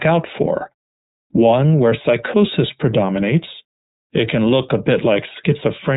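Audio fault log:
throughout, iLBC codec: the speech has passed through the iLBC narrowband codec, and its damage is plainly audible as a rough, synthetic texture. Each 30 ms frame's excitation is coded on its own, with no carry-over from the previous frame. The rate fits iLBC's 13.33 kbps mode. On a spectrogram, everything above 3.8 kHz is blank, with a hard ceiling.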